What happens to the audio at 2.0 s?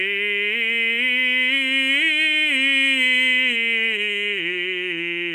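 Nothing goes wrong at 2.0 s; the music plays through that moment intact, with no dropout, click or other fault.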